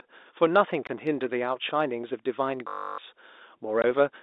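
A speech recording carried over a telephone-band line, audible as a narrow band from about 250 Hz to 3.7 kHz. It has two short dropouts. From 0.87 to 0.89 s and again from 3.82 to 3.84 s the speech cuts to dead silence for 20 ms. This is packet loss filled with silence: the receiver played silence where audio never arrived, and the 20 ms gap fits two lost 10 ms packets. From 2.68 to 2.98 s the speech turns into a steady, rasping 50 Hz buzz. This is a system hang loop: the host stalled while the sound hardware kept replaying the same 20 ms of buffer, fifteen times over. About a third of a second of the real audio is replaced by the repeating fragment.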